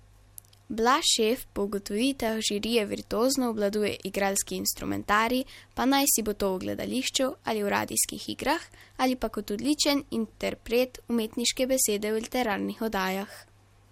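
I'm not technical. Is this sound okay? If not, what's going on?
No. DAB burbling at 8.13 to 8.19 s: a brief burbling glitch in the speech. Weak digital radio reception corrupted a small share of the data, so a few short audio chunks briefly got short blips of noise in some frequency bands.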